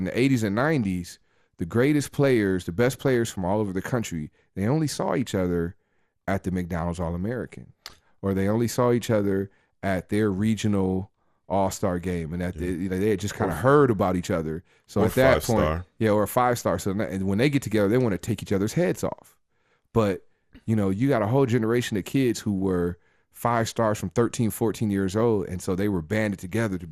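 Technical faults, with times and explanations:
throughout: MP2 compression. The speech sounds dull and muffled, with a gurgling, grainy roughness on the sound that is plainly audible from start to finish. This is likely low-rate MPEG Layer II coding, consistent with a bitrate around 80 kbps. The coder divides the signal into 32 equal sub-bands and shares too few bits among them, so upper bands drop out, flickering in and out, while the bands that remain are quantised coarsely enough to turn granular.
3.08 s: DAB burbling. A brief burbling disturbance cuts across the speech, short blips of noise in individual frequency bands. The pattern fits a burst of uncorrected bit errors, at a rate well under one percent, slipping through into the MP2 data over a few frames. Corrupted samples put short blips of noise into single sub-bands, producing that burbling texture.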